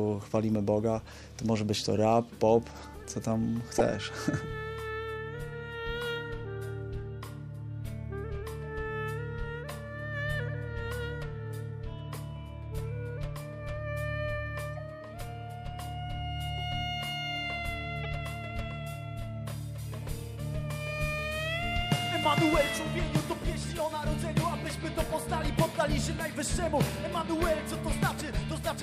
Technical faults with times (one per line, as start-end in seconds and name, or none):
1.07-1.09 corrupt frame decoded
3.76-3.81 corrupt frame decoded
18.03-18.06 corrupt frame decoded